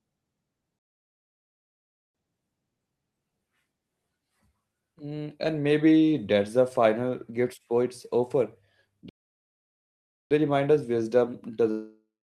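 At 0.79 s the speech stops dead for 1.36 s, then resumes at 2.15 s. It happens again after "final gift poets offer", from 9.09 s to 10.31 s, and picks up at "remind us wisdom". Both gaps are likely playback stalls, where the player ran short of data or was blocked and output fell silent.

After "remind us wisdom", at 11.71 s, the audio breaks off and never returns. This is likely a long network dropout. The last sound smears into a fading buzz.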